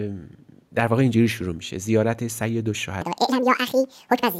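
From 3.02 s to the end, a section at the wrong speed is likely being played against a mismatched clock, running at 1.87 times its recorded rate. Speed and pitch jump together by roughly ten semitones, so the speech suddenly turns high, squeaky and hurried.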